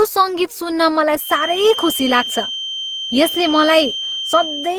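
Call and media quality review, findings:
Generation loss, whole clip: speech likely re-encoded through repeated Opus passes at 48 kbit/s, around five generations. Stacked requantisation leaves swirly, hollow, smeared speech with blurred onsets.

Feedback whistle, 1.16 s to end: loudspeaker-to-microphone loop likely sitting at the edge of feedback. Thin steady 3.1 kHz whistle, about 10 dB below the speech, swelling and fading slowly in level.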